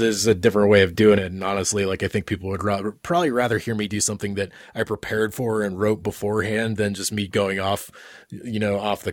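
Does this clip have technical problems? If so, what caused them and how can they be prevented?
Yes. At 1.18 s the level of the speech falls abruptly by about 6 dB and stays down to the end. The likely cause is one stereo channel dropping out: the material shared by both channels loses half its contribution to the mono sum, and anything carried only in the lost channel vanishes. On a waveform the envelope steps down sharply at that moment, and a spectrogram shows every band dimming at once. Checking cable connections and monitoring both channel meters during recording prevents this.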